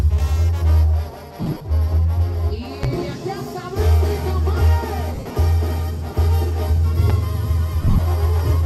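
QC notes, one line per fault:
1.42–1.61 s, 5.15–5.36 s, 7.82–7.99 s: lost LE Audio frames. In each stretch, about 120, 142.5 and 120 ms of audio went missing, scattered over 180, 210 and 165 ms rather than in one block. The longest unbroken gaps were roughly 40, 70 and 30 ms. This fits 16, 19 and 16 lost 7.5 ms frames. The LC3 decoder filled each gap by replaying the last spectrum with random signs, so tonal content turns into a noisy smear rather than dropping to silence.
2.83–2.86 s, 7.10–7.13 s: loud pop. Each is a single sharp pop about 10 dB above the surrounding sound, lasting about 30 ms. The sound carries on underneath, which separates it from the frame loss, where the audio itself is replaced by a smear. It is likely a voltage step or pulse from a plug, switch, static or driver glitch, shaped by the circuits that follow it.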